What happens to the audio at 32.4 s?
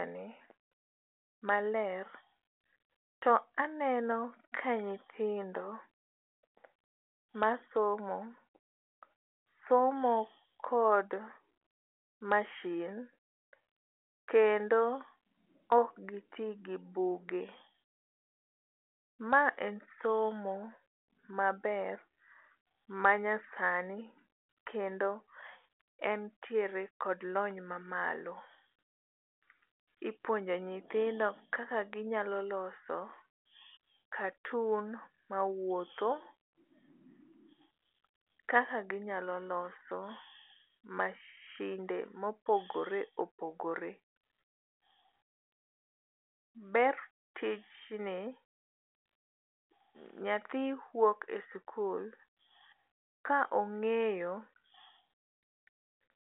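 At 32.4 s the speech carries on intact, passing through the G.726 telephone path at 40 kbit/s with its usual narrow band and nothing heard above about 3.8 kHz.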